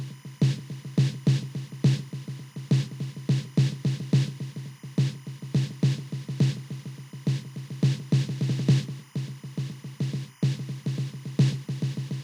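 From start to end, timecode bleed sits under the music: linear timecode at 25 frames per second leaking in from an adjacent track or cable. Its square wave flips between pitches near 1 and 2 kHz, giving a steady chirping warble roughly 30 dB below the programme.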